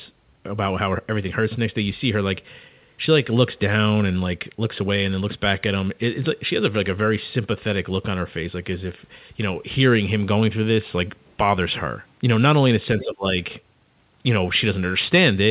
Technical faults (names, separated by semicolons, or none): speech suppressed in double talk; other side's voice leaking through